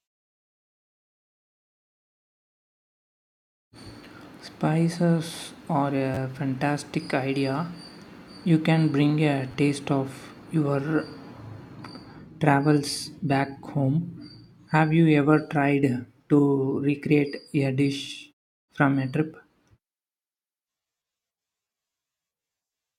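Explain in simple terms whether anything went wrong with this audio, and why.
New audio twice failed to arrive in time, so the player repeated its last small buffer, a fault called repeated buffer. At 6.14 to 6.17 s and 9.52 to 9.54 s, a tiny slice of sound, about 11 ms long (which fits a 512-sample buffer), plays twice more with hard joins. This makes a brief click or buzz, and about 20 ms of the speech is lost each time.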